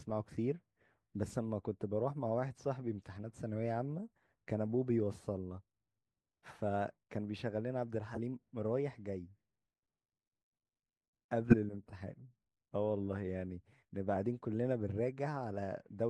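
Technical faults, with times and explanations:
8.14–8.18 s and 11.50–11.54 s, corrupt frame decoded: damaged compressed frames were played anyway, so misread gains and codes put energy at the wrong frequencies, causing brief glitches. The first is faint, peaking around -30 dBFS, with a length that fits two frames. The second is a single frame's worth but much louder, near -10 dBFS. On a spectrogram each appears as a short vertical smear of misplaced energy.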